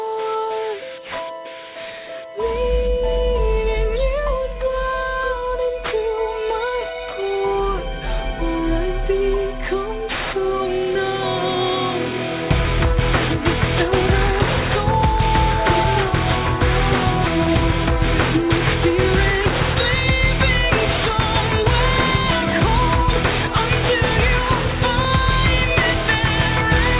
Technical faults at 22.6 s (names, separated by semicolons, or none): aliasing